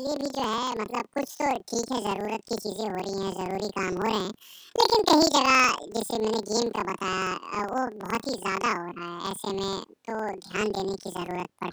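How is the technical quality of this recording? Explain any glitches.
The recording has one fault, audible across the entire clip. Planar audio read as interleaved, start to end: each 46 ms block of left-then-right samples is read as alternating pairs, so the speech plays an octave high with a 21.5 Hz flutter.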